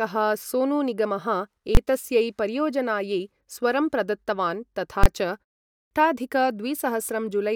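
At 1.75 to 1.77 s and again at 5.04 to 5.06 s, invalid numbers at full scale appear: each block of about 21 ms, which fits a 1024-sample buffer, pins to maximum and lands as a single bang rather than a dropout. At 5.69 to 5.91 s, after a 0.33 s pause, a clipped start after a pause swallows about 220 ms, so the sound bursts in missing its onset, unlike faded pauses, which lose nothing.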